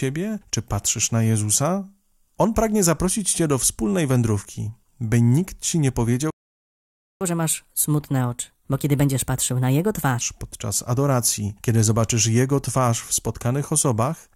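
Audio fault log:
6.30–7.21 s: playback stall. The speech cuts off right after "by nikt ci nie" and the output goes silent for about 0.9 s. The likely cause is the player running out of buffered data, or its audio thread being blocked, before output resumes where it stopped.
7.21–10.21 s: catch-up at higher speed. For three seconds the speech runs at 1.25x with pitch raised by roughly four semitones, as the player resamples its backlog to regain lost time. Normal rate returns before "podczas adoracji kiedy zobaczysz".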